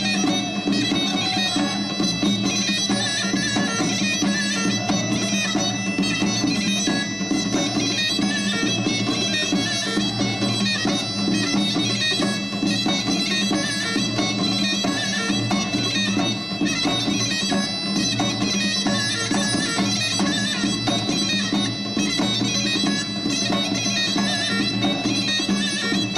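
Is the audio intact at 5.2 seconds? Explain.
Yes, the audio is intact at 5.2 seconds, with no dropout, click, distortion or other fault at that point.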